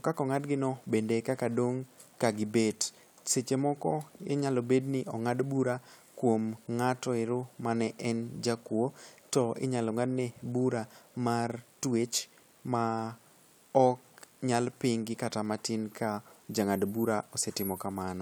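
No technical faults are audible.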